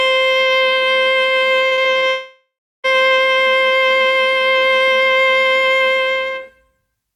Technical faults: repeated packet loss (robotic sound); long network dropout

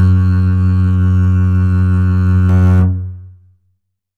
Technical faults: channel delay (comb filtering)

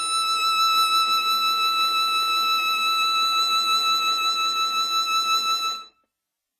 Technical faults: WMA compression

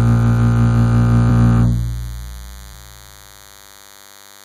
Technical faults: DECT cordless phone buzz; compressed frames skipped

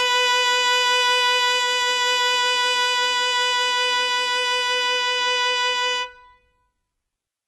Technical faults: HE-AAC compression

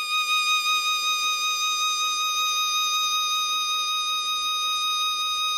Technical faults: MP2 compression

